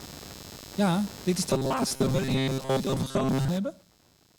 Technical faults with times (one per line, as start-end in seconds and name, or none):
0.00-4.39 computer activity noise
1.50-3.48 robotic sound from repeated short buffers